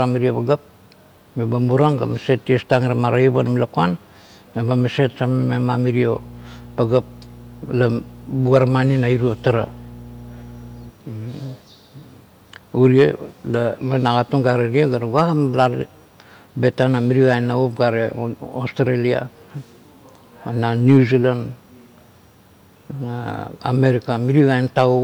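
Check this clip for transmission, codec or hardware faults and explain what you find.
One fault is present: mains hum from 6.11 s to 10.93 s. Across that stretch a steady low drone sits beneath the speech, a fixed 60 Hz tone with some low overtones, roughly 20 dB below the speech. It comes from power-line current leaking into the signal path, through a ground loop between connected equipment or magnetic pickup from a nearby transformer, and it stops at 10.93 s.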